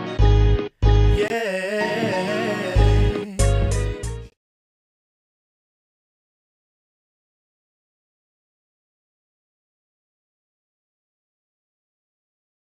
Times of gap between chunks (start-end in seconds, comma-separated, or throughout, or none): 1.28-1.30, 4.30